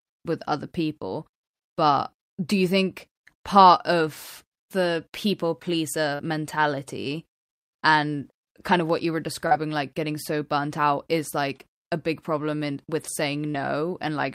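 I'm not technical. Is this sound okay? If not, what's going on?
No. At 6.15, 9.47 and 13.51 s there is short concealed packet loss: about 40 ms of speech arrived too late, and the receiver guessed to fill each gap. Unlike a plain dropout, you hear a brief smear or wobble rather than silence.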